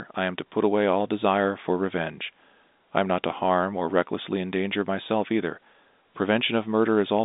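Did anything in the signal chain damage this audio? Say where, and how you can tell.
No, nothing in the signal chain stood out as damaging this speech on listening, beyond the expected narrow band of a telephone line coded as G.711.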